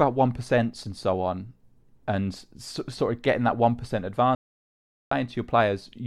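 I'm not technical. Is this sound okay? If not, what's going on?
No. Right after "getting that one percent", at 4.35 s, the speech cuts out into dead silence, with no background hiss at all, until 5.11 s. That is an audio dropout to silence, about 0.76 s lost, likely from the microphone connection briefly failing.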